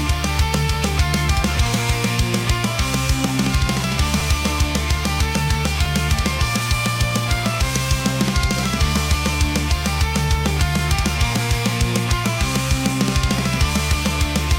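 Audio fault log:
4.20 s and 5.86 s, repeated buffer: new audio arrived late, so a 5 ms slice replayed twice, then once, and each replay comes through as a click or brief buzz, which fits a 256-sample buffer.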